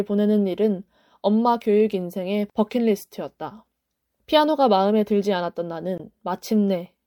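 At 5.98 to 6.00 s the speech breaks up briefly. This is damaged data in a compressed stream. Some frames arrive corrupted, so the decoder misreads them and loses sync. It then hunts for the next valid frame header, and the audio resumes.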